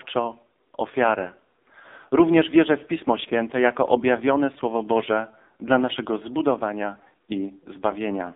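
The speech here has been pushed through the AMR narrowband mobile codec at a very low bit rate, which fits one of AMR-NB's lowest modes around 6 kbps. The codec rebuilds the voice from a vocal-tract model driven by sparse pulses. With so few bits that model strains, so for the whole clip the voice sounds heavily buzzy and synthetic, squeezed into a phone band from 250 Hz to 3.7 kHz, with nothing audible above 3.7 kHz.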